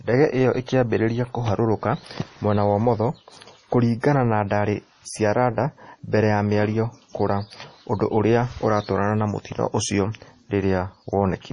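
Speech, with heavy MP3 compression running the whole way through. The treble stops dead at about 10.6 kHz, and the sibilants go watery and chirpy as weak frequency lines flicker in and out, which fits a starved bitrate around 32 kbps, likely from a low-rate MP3 encode.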